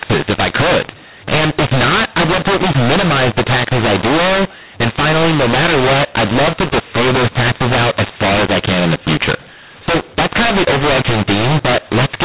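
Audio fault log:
throughout, mu-law and A-law mixed up: The speech was coded with A-law but decoded as mu-law. Each level passes through the wrong curve. Some samples come out too loud, others too soft. The sound turns harsh and gritty, and pauses fill with hiss.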